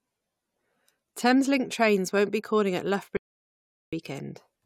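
At 3.17 s, right after "won't be calling at", the speech stops dead. This is an audio dropout to silence. The gap runs to 3.93 s, so about 0.76 s of sound is missing. It is silence, with no room tone underneath. The cut is abrupt at both ends, and speech resumes mid-flow. The likely cause is a lost input, such as a dropped link or a brief mute, while recording carried on writing silence.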